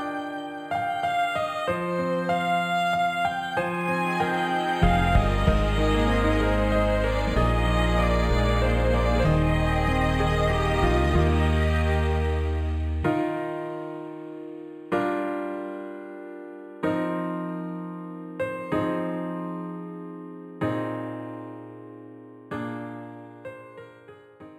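Throughout, imaging from linear upsampling: dulled highs, plus faint mirror images from 5.5 to 11 kHz roughly 30 dB down, adding a metallic shimmer consistent with an 11 kHz-to-48 kHz rate change.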